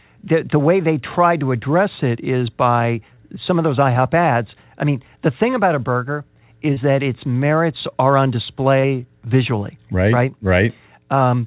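Short concealed packet loss occurs three times, at 3.14 to 3.20 s after "address it is by", at 6.74 to 6.79 s after "thing about a burger", and at 8.80 to 8.86 s after "its merits are on". Each time about 30 ms of audio arrived too late, and the receiver bridged the gap by extending the preceding sound before blending back. Each event is a brief smear or wobble in speech that is band-limited to nothing above 4 kHz.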